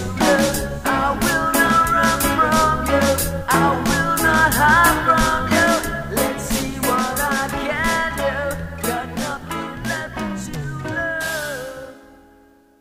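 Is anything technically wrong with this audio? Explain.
No, nothing is technically wrong with this audio.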